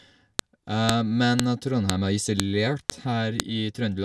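Speech pieces were joined with their WAV headers intact, so header bytes play as a sharp, loud click every 0.5 s, a file header played as audio at 0.39, 0.89, 1.40, 1.90, 2.40, 2.90 and 3.40 s.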